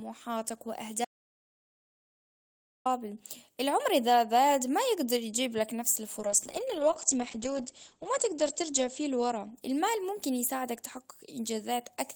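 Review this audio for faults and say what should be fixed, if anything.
From 1.05 to 2.86 s the speech cuts to dead silence with no room tone: an audio dropout to silence, likely a lost input link writing silence.

From 6.21 to 11.09 s the speech turns muffled and watery: a call bitrate drop from 32 to 9 kbps, narrowing the band from 20 kHz to 8 kHz.

Secure the input connection and mute controls, and give the call a stable link with enough bandwidth headroom for the encoder to hold its bitrate.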